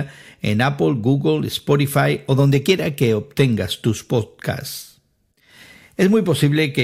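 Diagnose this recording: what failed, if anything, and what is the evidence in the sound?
Nothing failed, and the sound of this speech recording gives no evidence of a fault at any stage.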